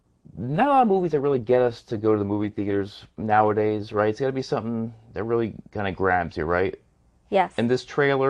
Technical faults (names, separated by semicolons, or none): adaptive stream starting at a low bitrate